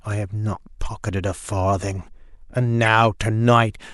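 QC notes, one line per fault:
2.83–2.88 s, corrupt frame decoded: a short squeaky blip of misplaced energy lasting about 46 ms, which fits a couple of damaged compressed frames played as if valid. Unlike a dropout or concealment gap, sound is added rather than muted or smeared.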